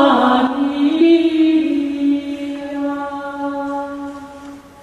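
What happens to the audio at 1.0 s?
At 1.0 s, damaged data in the compressed stream throws the decoder out of sync as it hunts for the next frame header, producing a brief blip. Underneath, a sudden gain jump from 0.47 s onward, likely a gain change applied without a ramp, keeps the sound and background noise about 6 dB quieter.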